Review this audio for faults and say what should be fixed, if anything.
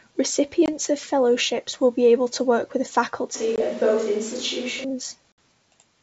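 Packet loss on an ADPCM call occurs three times. There are hard-edged gaps at 0.66 to 0.70 s and 3.56 to 3.63 s, each losing 20 ms. A longer 60 ms hole follows at 5.32 to 5.38 s, which sounds like about three consecutive packets. Silence replaces the missing data. The decoder's predictor and step size then no longer match the sender's. So the speech resumes with brief slight distortion before it settles. Prevent it with packet loss concealment plus decoder state resynchronisation, and a jitter buffer sized to absorb late packets.

A switch to a distant microphone begins at 3.35 s, just after "able to work with", and lasts until 4.84 s. The voice suddenly turns roomy and hollow, with thinner bass. The level barely changes. Room noise rises to roughly 20 dB below the speech. The jump back at the end is equally abrupt. The likely cause is that the close microphone dropped out and a farther one, such as a camera's, took over. 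Prevent it by securing the close microphone's connection and monitoring its feed throughout.

The G.722 wideband coding holds clear detail up to 7 kHz and shows at most faint coding noise.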